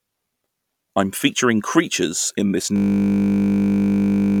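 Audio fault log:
2.76 s to end, system hang loop: Just after "featuring creatures in this", the speech stops progressing and a 20 ms slice of audio repeats exactly, roughly 80 times, until the clip ends. The playback side appears to have stalled while the audio hardware kept replaying the last filled ring buffer. Because the buffer is so short, the repetition merges into a steady buzz at the 50 Hz loop rate rather than an audible stutter.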